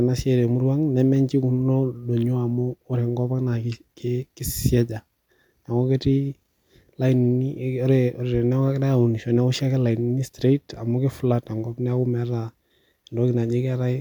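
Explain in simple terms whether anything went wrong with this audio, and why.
Nothing went wrong with this speech recording. No dropouts, glitches or other technical faults can be heard anywhere in it.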